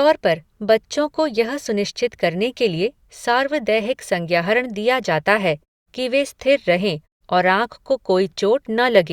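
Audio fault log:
No faults detected in the speech; the background drops to silence in the pauses and returns before each phrase, as expected of the system's normal gating.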